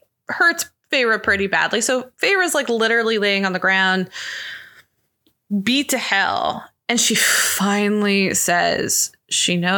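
Speech recording, no technical faults detected.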